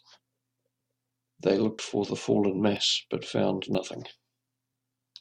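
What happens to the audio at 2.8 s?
At 2.77 s the speech jumps forward: a small sliver of sound, roughly 20 ms, is simply absent, and what comes after is butted directly against what came before with no gap of silence, so the flow skips slightly. This is likely audio missing between chunks, where the recording was handled in pieces of 1.0 s and a brief stretch was dropped during the handover from one chunk to the next.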